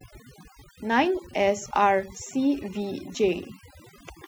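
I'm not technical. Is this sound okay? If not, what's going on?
No. The whole clip shows overdone noise removal. A cleanup tool was set too strong. It shut off parts of the sound it mistook for background noise, including soft parts of the speech. The gaps sound quieter, broken up into twinkling, warbling specks.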